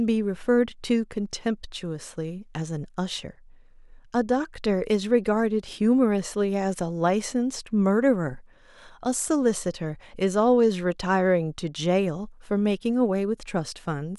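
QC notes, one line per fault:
No fault is heard anywhere in this speech clip. Nothing here needs attention or a fix.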